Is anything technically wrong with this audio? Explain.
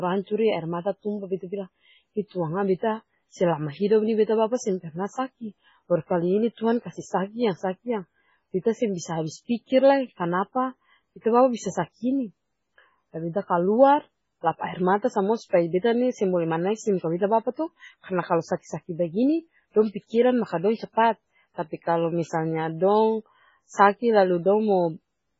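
Yes. Throughout the speech there is heavy damage consistent with, most likely, MP3 compression at a very low bitrate, around 16 kbps. Starved of bits, the encoder removes everything above about 7.6 kHz and drops weak frequency lines that flicker in and out from frame to frame, so the sound turns watery and swirling, with metallic chirps on s sounds and smeared attacks. A simple low-pass filter would dull the top without that shifting, bubbling texture.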